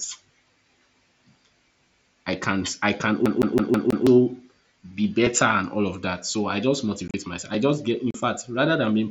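Speech, carried over a wideband mSBC headset link whose 8 kHz bandwidth and faint graininess on louder sounds are audible throughout. From 2.33 s to 7.55 s there are clock drift buffer slips: about three clicks spaced evenly every 2.28 s, ending just before "I just get in." The likely cause is two devices running on unsynchronised clocks roughly 700 ppm apart, so a buffer periodically drops or repeats a few dozen samples. Between 3.26 s and 4.07 s the audio behaves like a CD stuck on one turn. A 162 ms fragment plays five times over, with a brief mute at each jump. That fast, identical stutter sets it apart from the isolated, widely spaced drift clicks. There is also unconcealed Bluetooth headset packet loss. At 7.08 s about 45 ms goes missing in abrupt gaps scattered over 60 ms, the longest lasting 30 ms. At 8.11 s, right after "I just get in," roughly 38 ms drops out. Here whole headset packets were lost and replaced with silence rather than patched over, which gives hard-edged holes instead of repeated audio.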